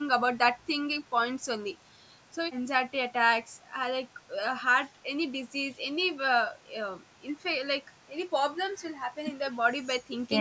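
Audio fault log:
No faults found in the speech; the call microphone processing is working as intended, with the lowest bass trimmed and no content above 8 kHz.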